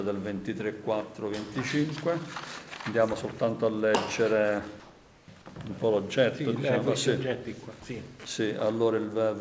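From 4.80 to 5.28 s the real background gives way to steady, featureless hiss about 1 dB quieter, likely comfort noise in place of the background, filling a transmission gap.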